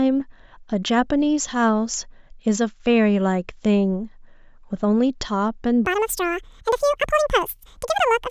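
From 5.85 s to the end at 8.3 s, the speech jumps to double speed and rises a full octave, about 12 semitones. This is a wrong sample rate fault: the samples are clocked out at twice the rate they were captured at, with no resampling, so duration halves and every frequency doubles together. The result is a chipmunk-like, hurried voice. The 2:1 ratio fits 16 kHz material being played as if it were 32 kHz.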